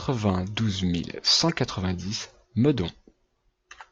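At 1.49 to 1.51 s, just after "mille cent", a corrupt frame decoded produces a short blip in the speech. Bit errors landed in the compressed data for about two consecutive frames, and the decoder reconstructed them anyway, misreading gain values and spectral codes so that energy was placed at frequencies where the signal had none. The result is a brief chirp-like burst, peaking at roughly -15 dBFS, lasting only as long as the damaged frames.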